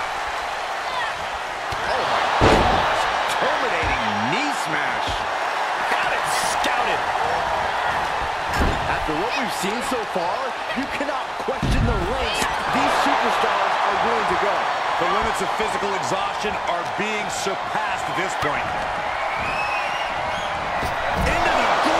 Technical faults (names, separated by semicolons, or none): none